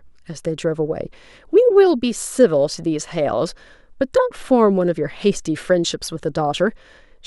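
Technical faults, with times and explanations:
No technical faults can be heard in the speech recording. There is nothing here that calls for a time or an explanation.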